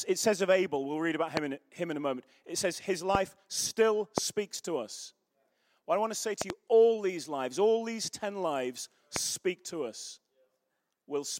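Loud pops break through the speech at 1.37–1.39, 3.15–3.17, 4.18–4.20 and 9.16–9.18 s, with a double pop at 6.42–6.52 s. Each is a sharp thump far above the speech, which carries on underneath. A likely cause is a voltage spike from static or a switch.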